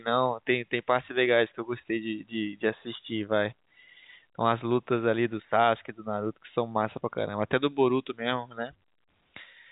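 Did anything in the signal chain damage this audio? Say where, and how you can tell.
No, none of the stages in the chain has damaged this speech. What can be heard is the G.711 telephone coding doing its normal job, with the band stopping at about 3.8 kHz and only a faint level-following grain from the logarithmic 8-bit coding.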